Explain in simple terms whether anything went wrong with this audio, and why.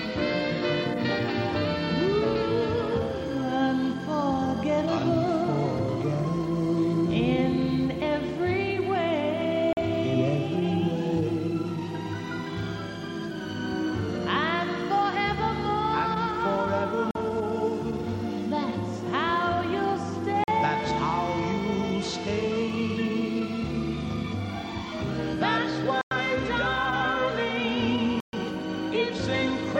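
Five blocks of digital silence drop the sound to nothing: 43 ms gaps at 9.73, 17.11 and 20.44 s, consistent with an unfilled 2048-sample buffer, then longer gaps of 0.1 s at 26.01 s and 0.13 s at 28.20 s.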